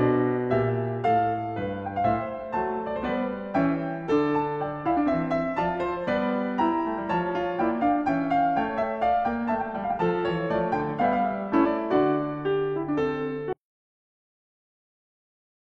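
Damaged data in a compressed stream shows up twice in this music clip: a brief blip at 8.78 s, then a longer disruption from 11.61 to 11.67 s, about 54 ms. In both places the bitstream has been corrupted, so the decoder misreads or rejects the affected frames, loses its footing and hunts for the next valid frame header. That produces a short disruption in the music. An audio dropout to silence follows at 13.53 s and lasts to the end of the clip. The music cuts off mid-flow into silence, with no residual room tone or noise floor, for a little over two seconds. The likely cause is that the input signal was lost, through a disconnected source, a failed link or an accidental mute, while recording or encoding carried on writing silence.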